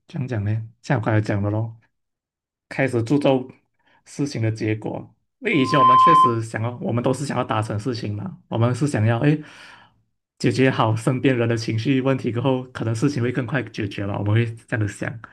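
A microphone re-amplifying its own loudspeaker causes loudspeaker feedback squeal from 5.52 to 6.42 s, a 1 kHz tone swelling quickly above the speech.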